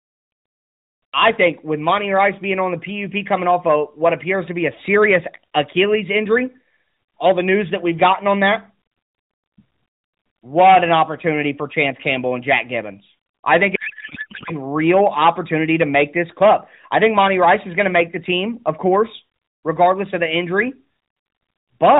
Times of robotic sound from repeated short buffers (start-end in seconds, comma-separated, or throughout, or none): none